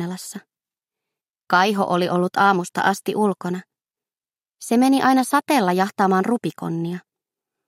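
Nothing in the audio stood out as a technical problem on listening.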